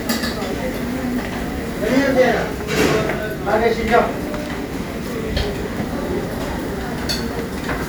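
At 5.43 s and again at 6.97 s the sound briefly freezes on a flat, held level before resuming. This is an underrun with held sample: the output buffer ran dry, the converter held its last value, and roughly 3 ms and 1.5 ms of audio were skipped, fitting 128- and 64-sample buffer gaps.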